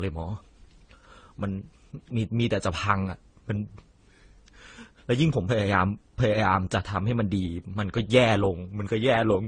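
Throughout the speech, nothing is heard above 9.8 kHz. The top end sounds dull and closed in. The different kinds of damage are heard together. This is likely transcoding between lossy codecs. The mix points to an AAC stage, then Opus, then Vorbis, each at low rates around 32 to 35 kbit/s. Each later encoder spent its bits on the earlier artefacts and added its own. The lowest cut-off in the chain remained.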